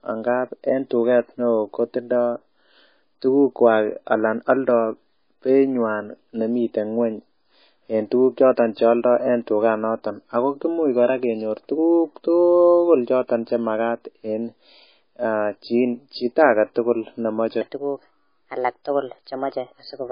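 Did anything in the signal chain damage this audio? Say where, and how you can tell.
Yes. The damage is at the codec stage and runs through the whole clip. The speech has a watery, swirly quality, and nothing is present above 5 kHz. On a spectrogram the treble ends at a flat ceiling, and the weak upper components flicker on and off from frame to frame. This is likely heavy MP3 compression, at a bitrate of roughly 19 kbps.

A second fault, a section at the wrong speed, runs from 17.61 s to the end at 20.11 s. The speech plays 1.24 times too fast, so it sounds hurried and about four semitones high. On a spectrogram the harmonics jump upward and the waveform's syllables compress in time. This likely happened at the playback or editing stage, with that stretch clocked wrongly.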